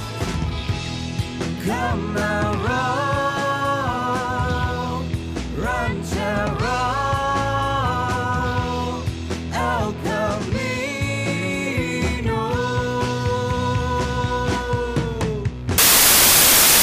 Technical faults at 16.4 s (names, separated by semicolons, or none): samples built from the wrong bytes